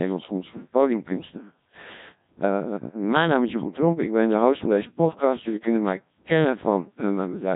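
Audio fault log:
Throughout, Codec 2 vocoder: speech is rebuilt from pitch and envelope as sine waves, so it sounds heavily robotic and buzzy, with nothing above 3.8 kHz, at 1.3 kbit/s.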